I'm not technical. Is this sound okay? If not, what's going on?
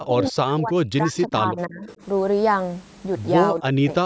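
No. For two stretches, the call's echo canceller likely mistook the talker for the far side's loudspeaker while both spoke at once, and turned everything down. This is called speech suppressed in double talk: the speech sinks almost to silence or breaks into pieces from 0.06 to 1.88 seconds and again from 3.53 to 3.89 seconds.

Right after the first stretch, between 1.87 and 1.95 seconds, a loudspeaker's echo canceller likely failed to remove all of the sound its microphone picked up. This echo leak comes through as a faint copy of the speech, arriving about a third of a second late, a brief, quiet scrap underneath.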